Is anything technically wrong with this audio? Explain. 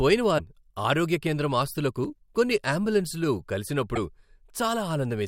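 Yes. At 0.37–0.40 s, just before "ఆరోగ్య కేంద్రం ఆస్తులకు కొన్ని", and again at 3.95–3.98 s, the speech skips forward with a brief chirp, burst of noise or short hole. This is likely a broken MP3 bit reservoir: 24 ms frames were cut, so the next frame decoded borrowed bytes from the wrong frame.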